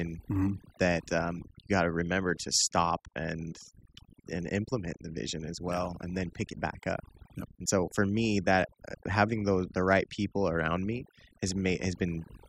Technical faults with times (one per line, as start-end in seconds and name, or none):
0.00-12.48 overdone noise removal